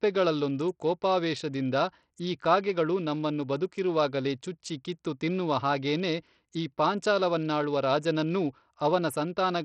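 From start to finish the speech carries the sound of Bluetooth SBC compression, likely from a heavily starved link around 64 kbps. The upper bands get too few bits, so sibilance and other treble detail flicker in and out, with a gritty quantisation noise and aliasing riding on the voice. A plain low-pass would dull the top steadily; here content still reaches about 20.9 kHz but comes and goes. The roughness spreads across coarse, wide bands rather than in the finer, swirly patches of a perceptual codec like MP3.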